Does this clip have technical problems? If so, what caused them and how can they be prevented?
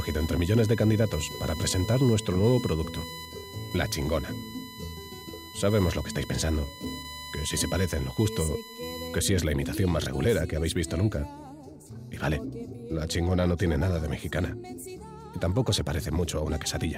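Yes. From the start to about 9.18 s a thin, fixed-pitch whine sits under the audio, roughly 15 dB below the main signal, with its fundamental at 1 kHz and its strongest component at the 4 kHz harmonic. This is USB whine: the bus draws current in bursts every 1 ms, and that periodic load leaks into the audio through shared power or ground. To prevent it, power the interface separately or use an isolated USB hub or ground-loop isolator.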